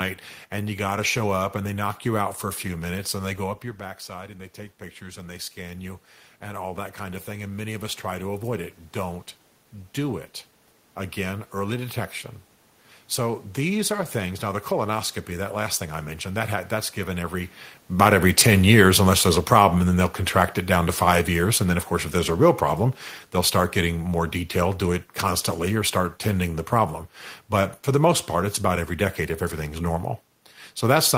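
From 2.68 to 8.8 s, just after "you out for a", there is automatic gain rising. The talker moves away from the microphone around 3.5 s, dropping the input by about 11 dB. The gain control then climbs about 8 dB over several seconds, so voice and room noise swell together. On the waveform, the envelope widens steadily. On a spectrogram, the background noise floor brightens along with the speech.

From 17.87 to 28.24 s, beginning after "that that's given every" and ending before "part it's about every", there is automatic gain falling. The talker shifts position around 17.5 s, the control lowers its gain, and the gain sinks about 8 dB over roughly ten seconds. The speech starts loud and gradually recedes, with the room noise sinking with it. The waveform envelope slowly narrows, and the spectrogram's background dims alongside the voice.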